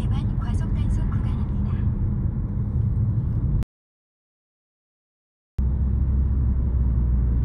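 At 3.63 s the audio drops out to silence. It stays dead until 5.59 s, a gap of nearly 2 s. The sound does not fade. It stops abruptly mid-flow and resumes just as abruptly. The gap holds silence, with no room tone or background hiss. The likely cause is a brief loss of input, such as a disconnected device or failed link, while the recorder kept writing silence. Whatever sounded during those seconds is lost.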